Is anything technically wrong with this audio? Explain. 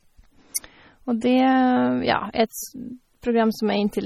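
Yes. Throughout the speech there is heavy coding damage, likely from MP3 compression at a low bitrate, consistent with around 32 kbps. With so few bits, the encoder discards frequency lines it judges inaudible, and weak lines flicker in and out between frames. The result is a watery, swirling texture, with metallic chirping on s sounds and softened consonant attacks. Nothing is present above 18 kHz.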